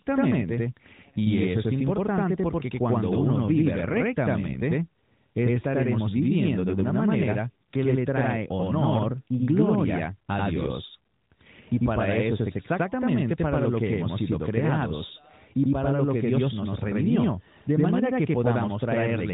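A channel delay (doubling) runs through the whole speech clip. One channel arrives about 92.9 ms behind the other, which fits a 4096-sample buffer. When the two are summed to mono, the late copy is heard at equal level as a distinct slap echo trailing every syllable, giving a doubled sound. This sits on top of the narrowband AMR mobile codec path, whose top end stops near 3.8 kHz with only light coding roughness.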